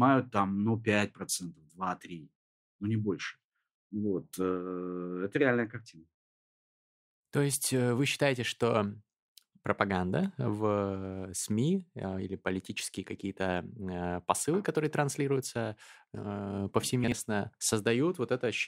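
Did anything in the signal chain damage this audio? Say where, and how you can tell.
Yes. Chunks out of order between 17.04 and 17.12 s near the end of the speech: a 40 ms chunk plays one chunk late, after the piece that should follow it. Nothing is missing, but the swapped order leaves a brief jumbled moment with three hard joins, pointing to buffer or packet reassembly.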